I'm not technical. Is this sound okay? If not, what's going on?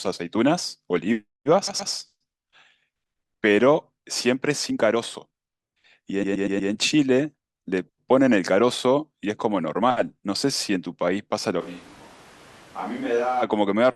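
No. There are two problems.

Repeated frames: at 1.67 s, a short slice of the speech, about an eighth of a second, plays three times in a row, adding 0.24 s. At 6.23 s the same kind of slice plays five times, adding 0.48 s. Each is heard as a stutter, because the recording chain stored or sent those pieces more than once.

Switch to a distant microphone: from 11.62 s to 13.41 s the voice suddenly turns roomy, hollow and thin, drops to a much quieter level, and sits among more background noise before returning. The likely cause is that the close microphone dropped out and a farther one covered that stretch.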